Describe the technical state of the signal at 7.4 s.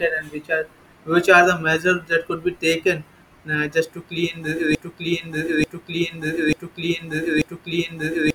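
At 7.4 s the stream has likely stalled into a broken-record loop, from 4.75 s to the end: one 0.89 s fragment repeats back to back.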